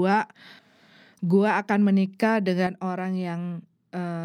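One channel drops out at 2.67 s in this speech clip and stays gone to the end, so the level falls abruptly by about 6 dB. The likely cause is a lost stereo channel: once summed to mono, the shared speech loses half its contribution.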